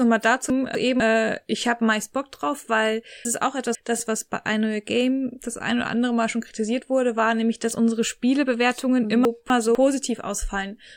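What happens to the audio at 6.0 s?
Nothing goes wrong at 6.0 s; the speech carries on intact through that moment, with no dropout, click or distortion.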